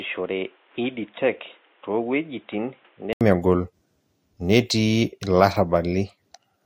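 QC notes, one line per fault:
0.00–3.21 s, input switched to a poorer device: speech sounds dull and boxy, roughly 10 dB quieter, with added background noise about 30 dB down, likely a narrowband microphone. Spectrogram shows a hard ceiling at 3.8 kHz; waveform shows an 80 ms flat gap before full bandwidth returns.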